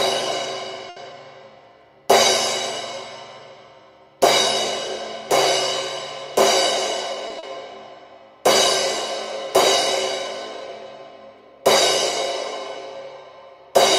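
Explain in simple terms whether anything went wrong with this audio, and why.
Two things go wrong here, and they're both network hiccups.

The first is a short stall from a late packet, at 0.89 s and again at 7.28 s. A chunk of audio arrived late, the receiver ran out of material to play, and it stretched the last bit of sound to cover the gap: about 70 ms the first time, 20 ms the second. Nothing gets lost, but the sound hangs on a moment too long, then picks up where it left off.

The second is a short concealed packet loss, at 7.39 to 7.45 s, right after that second stall. This time about 40 ms of audio never showed up at all. The receiver papered over the hole by continuing the previous sound and blending back in, so you get a brief smear or wobble there, and whatever really happened in that sliver is simply gone.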